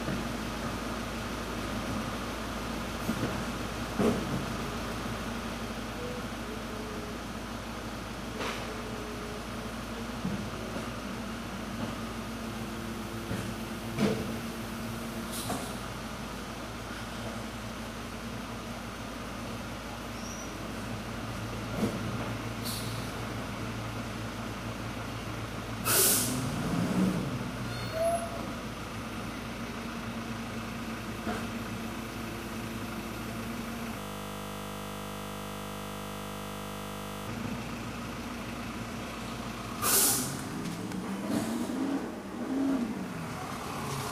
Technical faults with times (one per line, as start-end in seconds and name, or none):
33.99-37.28 system hang loop